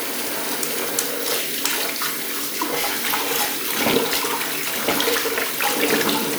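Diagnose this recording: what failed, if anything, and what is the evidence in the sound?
The driver or buffer stage is the culprit: periodic USB or driver dropouts. From about 2.96 s to 5.90 s there's a regular tick every 0.49 s, around seven of them, where roughly 10 ms of audio gets skipped outright as something blocks the bus on a timer.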